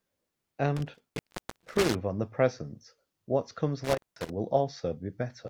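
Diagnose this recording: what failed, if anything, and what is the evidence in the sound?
Analogue wiring failed: an intermittent contact. The speech cuts out with crackle at the edges, once between 0.77 and 1.95 s (about 0.54 s open) and again from 3.84 to 4.30 s (about 0.19 s open). A loose plug or cable briefly breaks the signal path, leaving faint hiss.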